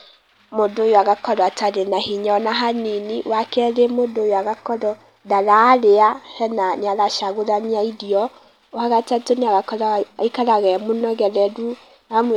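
No technical faults can be heard anywhere in this speech recording. Nothing in the signal chain audibly goes wrong at any point.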